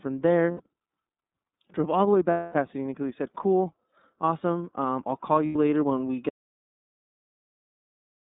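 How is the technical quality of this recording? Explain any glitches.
The recording is narrowband and coded, with three short concealed gaps and a drop to silence that lasts to the end.

Throughout, the speech sounds thin and slightly rough and synthetic, confined to roughly 150 Hz to 3.7 kHz with nothing above. This is the iLBC codec, a narrowband VoIP coder that encodes each frame's excitation independently. The band-limiting and plainly audible coding grain fit its 30 ms frame mode at about 13.33 kbps.

At 0.51 s, 2.31 s and 5.46 s the speech briefly turns into a held, slightly buzzy or breathy vowel. The first and third events last about 90 ms, and the one at 2.31 s stretches to about 240 ms and fades as it goes. These are lost iLBC frames. The decoder fills each gap by repeating the last pitch cycle blended with noise. The lengths point to roughly three, eight and three missing 30 ms frames. 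Because iLBC frames stand alone, the speech is clean again almost immediately after each gap.

From 6.29 s to the end, the sound cuts off mid-flow into total silence, with no room tone at all. This is an audio dropout to silence. Silence was written in place of the signal, most likely because the input was lost through a disconnected device, a failed link or an accidental mute. Whatever followed that point is gone.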